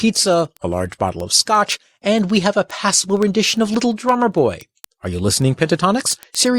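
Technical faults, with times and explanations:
0.10–6.58 s, word clock ticks: an unlocked receiver clock slips one sample about every 50 ms, giving regular sharp ticks seen as thin vertical spectrogram lines.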